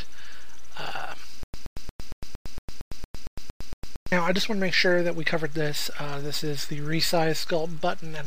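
From 1.43 to 4.12 s there's a stutter with silent gaps: a 124 ms burst repeats eleven times, 106 ms of dead silence between, likely a stalled stream retrying.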